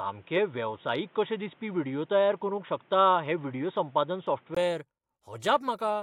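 Input switched to a poorer device, from 0.0 to 4.57 s: the speech has nothing above 3.8 kHz, so it sounds dull and boxy, with a faint extra hiss and a modest level shift. A 20 ms gap at 4.57 s marks the switch back, likely from a headset call profile.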